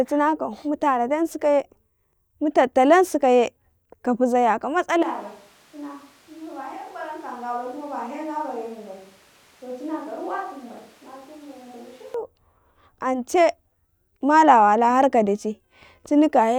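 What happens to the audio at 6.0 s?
At 6.0 s the speech has turned suddenly roomy and hollow, thinner in the bass and roughly 10 dB quieter, with background noise sitting only about 20 dB below it. This is a switch to a distant microphone, running from 5.03 s to 12.14 s. The likely cause is that the close microphone's signal dropped out, leaving a mic further away that picks up more reflections and ambient noise than direct sound.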